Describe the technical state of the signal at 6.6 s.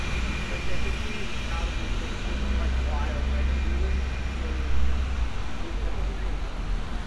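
At 6.6 s the signal is intact, with no audible fault at that moment.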